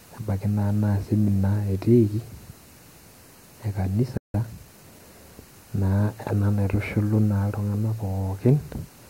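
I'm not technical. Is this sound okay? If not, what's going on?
No. At 4.17 s the speech cuts to silence for about 170 ms, a playback stall, likely from the player running short of data, then resumes at 4.34 s. From 4.34 to 5.00 s there is time-compressed catch-up: the player trims small slices to clear its backlog, so the speech runs about 1.25 times fast at normal pitch.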